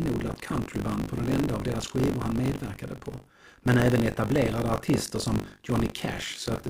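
Buffer tearing runs throughout the speech, from start to finish. The writing side of the ring buffer and the hardware reading it have drifted out of step, so each 20 ms period is partly filled with stale audio, around a sixth of it, from roughly 40 ms earlier, hard-spliced against current sound at both edges. Those repeated discontinuities produce a steady robotic rattle at 50 Hz that rides on the speech and drops away in the gaps.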